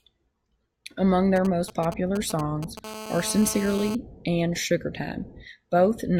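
From 1.36 to 2.79 s, galloping dit-dit-dit ticks and short raspy buzzes sit roughly 10 dB under the speech. These are GSM signalling bursts: a nearby 2G phone's 217 Hz radio pulses are rectified by the audio circuit. From 2.84 to 3.95 s, a hard, steady buzz at 217 Hz with many harmonics runs about 12 dB below the speech. This is GSM phone buzz, from the same kind of phone transmitting in bursts 217 times a second during a call.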